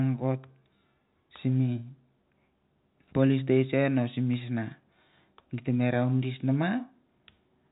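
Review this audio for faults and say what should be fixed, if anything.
Nothing to fix: the speech sits within the usual telephone band of G.711 coding, with no content above about 3.8 kHz, and no faults are audible.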